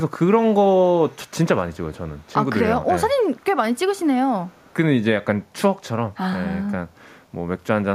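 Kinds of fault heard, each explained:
echo leak: a far-end echo canceller likely passed some loudspeaker pickup back, so four brief, very faint scraps of the speech return 292 ms late.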